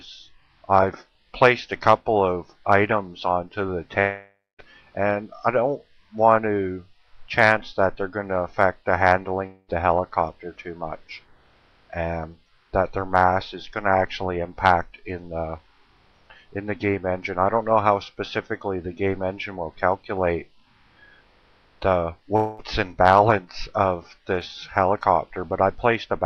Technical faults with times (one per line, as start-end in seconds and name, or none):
3.99-4.60 long network dropout
9.46-9.70 long network dropout
22.36-22.60 long network dropout